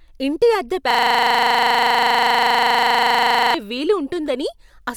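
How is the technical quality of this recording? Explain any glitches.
The recording has one serious glitch, a system hang loop, that interrupts the speech for over two and a half seconds.

From 0.91 s to 3.54 s the speech stops and becomes a rapid, mechanical stutter, a 40 ms fragment repeating at 25 times per second, dozens of times over. It happens because the computer or audio driver froze while the sound hardware kept replaying the same ring buffer, which points to a buffer about 40 ms long.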